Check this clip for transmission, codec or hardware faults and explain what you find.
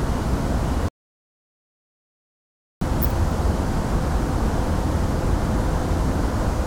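There's one clear problem: a playback stall from 0.89 to 2.81 s, where the sound cuts to silence for about 1.9 s, likely because the player starved of data.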